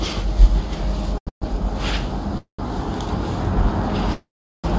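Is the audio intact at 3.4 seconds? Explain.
Yes, the audio is intact at 3.4 seconds, with no fault at that moment.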